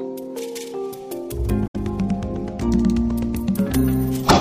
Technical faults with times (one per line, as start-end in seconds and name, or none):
1.66-1.76 damaged data in a compressed stream